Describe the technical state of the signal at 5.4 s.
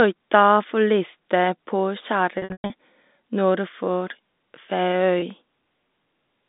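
At 5.4 s the speech carries a run of small, regular ticks, each a brief click or micro-gap lasting no more than a millisecond or two. There are five between 5.07 and 6.00 s, about five a second. These are CD scratch ticks: a blemish on the disc wipes out more data on each rotation than error correction can rebuild, so the player patches or mutes those samples once per turn. They sit over the narrow telephone-band sound of the line.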